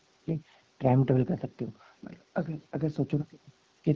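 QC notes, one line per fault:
No faults heard.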